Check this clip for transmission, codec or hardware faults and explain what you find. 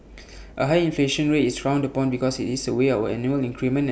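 Listening to this speech recording, nothing stood out as a transmission, codec or hardware problem.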